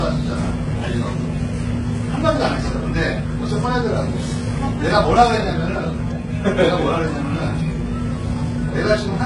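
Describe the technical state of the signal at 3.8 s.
At 3.8 s, as across the whole clip, the sound was likely transcoded between lossy codecs, consistent with a very low-rate HE-AAC encode re-encoded to Vorbis. Stacked artefacts from each codec are heard together, with nothing above 11 kHz.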